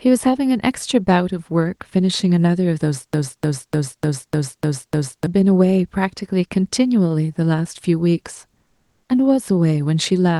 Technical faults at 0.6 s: none

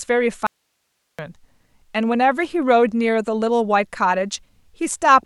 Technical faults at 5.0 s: none

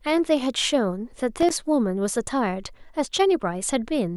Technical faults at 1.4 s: loose connector crackle

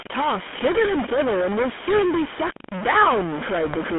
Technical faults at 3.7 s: stuck bit; GSM full-rate codec; GSM bit errors

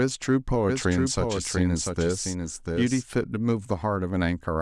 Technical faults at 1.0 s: doubled audio track

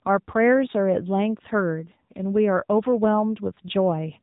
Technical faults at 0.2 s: AMR narrowband mobile codec

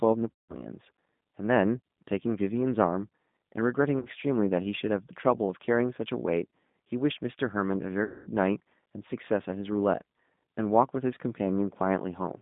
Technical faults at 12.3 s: G.729 codec

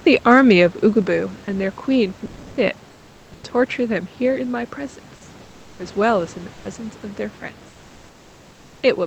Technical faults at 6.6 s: sound dropped by the voice detector

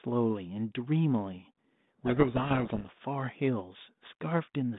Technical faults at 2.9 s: codec payload misread

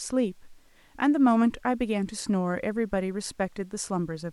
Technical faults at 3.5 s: none

